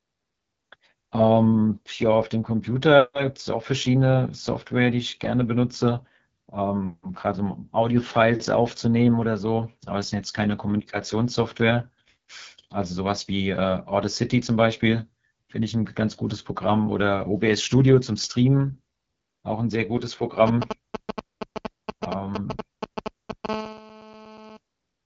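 All the way through, the speech carries the rough, raspy grain of the AMR wideband (HD Voice) codec running at one of its lowest modes, which fits roughly 8.85 kbit/s. The codec models the voice with a pulse-excited vocal tract filter up to 6.4 kHz and pads the top band with shaped noise, so at this rate the speech turns rough and raspy, with nothing at all above 7.5 kHz.

From 20.47 to 23.46 s you get GSM signalling bursts. A nearby 2G phone is handshaking with the network and keying its transmitter in short clusters, and something in the audio path rectifies that RF. The result is a galloping dit-dit-dit of brief 217 Hz buzzes, and it's loud, nearly level with the speech, so it really stomps on that stretch.

Right after, from 23.49 to 24.57 s, it settles into steady GSM phone buzz, which is what you'd expect once the phone is actually in a call and transmitting continuously at 217 bursts a second. 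Rectified, that becomes a hard, harmonic-rich 217 Hz rasp that has nothing to do with the speech, sitting about 14 dB below it. That's quieter than the signalling bursts.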